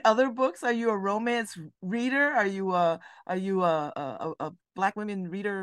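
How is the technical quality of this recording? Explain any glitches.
The recording has one clear glitch. From 3.59 s to the end, right after "you a are", there is a time-stretched section: the pace jumps to about 1.47 times normal while pitch stays unchanged, sounding rushed. Software likely compressed the segment by dropping short slices to fit a shorter length.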